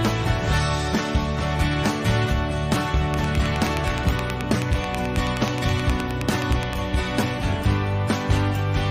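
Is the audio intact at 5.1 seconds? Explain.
No: 5.1 s falls inside a train of clicks from 3.14 to 6.74 s, about forty evenly spaced pops at 9.46 per second, peaking roughly 15 dB above the sound, likely from electrical interference. The steady, similar ticks distinguish it from random crackle.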